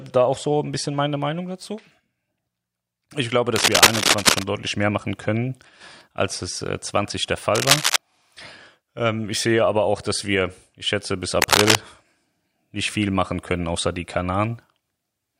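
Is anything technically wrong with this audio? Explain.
Yes, there's cable scratch noise over the speech three times: from 3.56 to 4.44 s, 7.55 to 7.96 s, and 11.42 to 11.77 s. Each is a short stretch of dense, ragged scratching and rustling that sits a bit louder than the speech itself. That's likely a worn cable or connector being moved. Its contact resistance jumps around quickly, and that flutter turns straight into those uneven bursts of noise.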